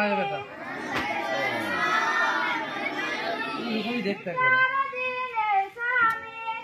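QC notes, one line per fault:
3.70–6.63 s, adaptive stream at a lower bitrate: at 3.70 s the sound abruptly turns duller and grainier, with nothing above 14.8 kHz, and this lasts to the end of the clip with no gap at the switch. The player has moved to a much leaner version of the stream, likely because the connection slowed. The sudden loss of treble and rise in coding artefacts point to a drop from a full-rate AAC encode to a low-rate HE-AAC one.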